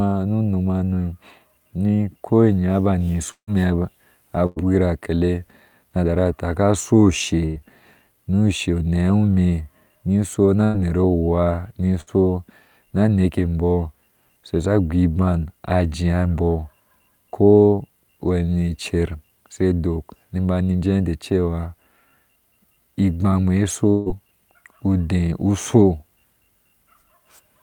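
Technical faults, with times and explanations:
3.31 to 3.50 s and 23.90 to 24.09 s, long network dropout: The sound stops arriving. The last sound is stretched into a fading buzz or hiss for about 160 ms. At 3.31 s about 90 ms of near-silence follows, while at 23.90 s the fill runs straight into the return. Each time about 120 ms of audio never plays. The cause is likely a dropout that pushed the playback delay up by roughly 40 ms.
3.51 to 9.28 s, 14.89 to 15.11 s and 24.10 to 24.29 s, jitter buffer speed-up: Each comes when too much audio had built up waiting. The receiver trims tiny pitch-length slices to catch up. Pitch stays put, but pace rises. The first stretch runs at 102% and drops roughly 150 ms, a drift too slight to sound hurried. The later two run at 117% and 116%, shedding about 50 ms and 40 ms, and sound briefly rushed.
4.46 to 4.59 s, 7.46 to 7.59 s, 10.64 to 10.77 s and 12.01 to 12.10 s, burst of packet loss: A short run of audio is lost in transit. 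The receiver holds the last sound as a fading buzz or hiss, about 100 ms long in the first three and 60 ms at 12.01 s. Then the sound resumes, with about 60 ms skipped each time. The first three also raise the delay by about 40 ms.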